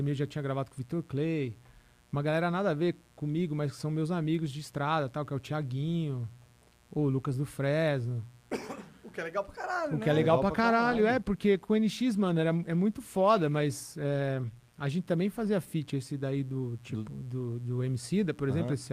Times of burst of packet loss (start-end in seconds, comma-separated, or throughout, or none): none